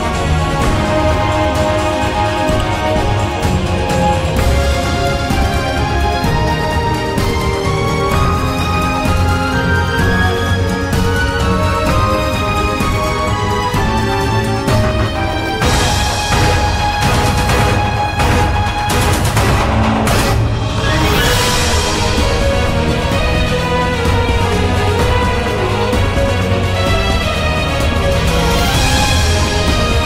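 No technical faults can be heard in this clip.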